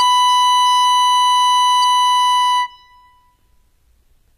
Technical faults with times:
0.00-4.37 HE-AAC compression

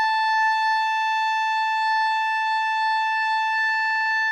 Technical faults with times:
0.00-4.32 doubled audio track

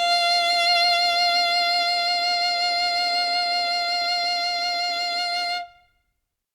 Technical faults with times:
none

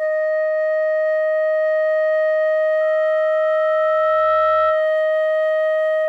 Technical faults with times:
2.80-4.91 loudspeaker feedback squeal

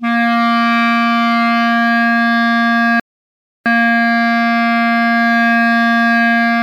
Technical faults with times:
3.00-3.66 rebuffering stall

